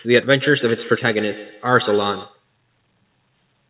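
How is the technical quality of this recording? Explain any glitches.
The speech is band-limited to 4 kHz, which points to a G.711 telephone codec, and it carries one fault.

From 0.41 to 2.44 s there is feedback echo between two devices. A second device in the room replays the call audio, this microphone picks it up again, and its echo canceller ignores sound it didn't play. Each syllable returns about every 150 ms, thinner and ringing, peaking about 16 dB below the speech.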